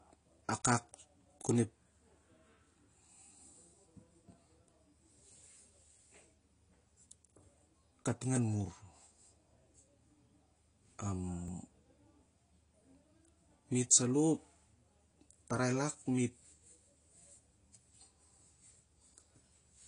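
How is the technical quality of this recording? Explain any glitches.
The recording has plainly audible compression damage throughout, plus two tiny glitches in the speech.

The whole clip sounds dull and smeared, with nothing above 10.2 kHz and a fizzy, warbling edge on sibilants. This is likely AAC compression, with AAC-LC discarding high frequencies and coarsely quantising the rest, consistent with a low bitrate around 32 kbps.

At 4.28 s and again at 11.48 s there is a brief click or buzz. Each is a repeated buffer. Fresh audio arrived late, so one very short chunk of about 1.45 ms, consistent with a 64-sample buffer, played twice with hard joins. No audio is skipped.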